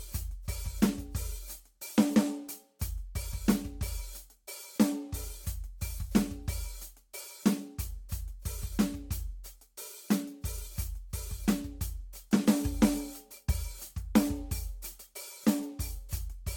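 Throughout, the music is swirly and hollow, with attacks smeared beyond what a single 70 kbit/s Vorbis encode would cause: likely generation loss from roughly seven passes.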